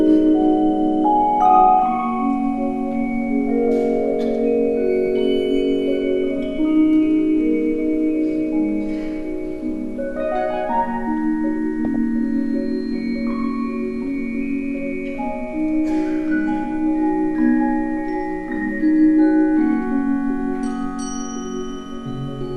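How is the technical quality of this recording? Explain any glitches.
One glitch stands out. From 11.85 to 11.96 s there is a brief burst of noise blips in single sub-bands, which is DAB burbling. Bit errors from weak reception slip past error correction and corrupt sub-band levels across a handful of frames.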